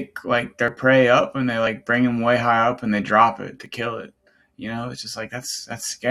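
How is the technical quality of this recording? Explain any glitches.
The recording has three brief glitches from overlap between stream segments. They fall at 0.68 s, just before "prey up and they", at 1.67 s, before "bring them way high", and at 3.66 s, before "kill it". Segment timestamps overlapped, so the player trimmed real speech. A few milliseconds vanished each time. The waveform jumps, giving a small click or skip. Spacing follows the one-second segments.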